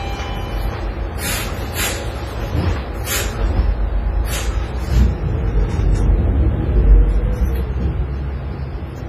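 Throughout, the audio has likely been through heavy WMA compression at a rate fitting about 24 kbps. Its long transform blocks smear quantisation noise and discard weak detail. Nothing survives above 14.6 kHz, and the sound rings and washes, with hiss breathing alongside it.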